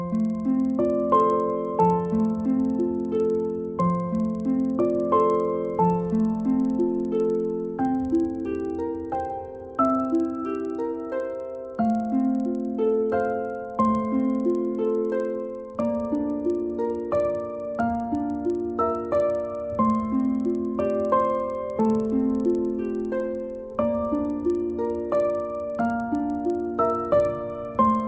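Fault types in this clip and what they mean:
Resampler restarted on every block: The sample-rate converter was reset at the start of each 50 ms block instead of carrying its history across, so at every block boundary its filter worked from missing or wrong neighbouring samples. Each edge leaves a small error, heard as a steady ticking at 20 per second that runs through the whole clip wherever there is sound, and the band limit heard fits a conversion from 44.1 kHz down to 16 kHz.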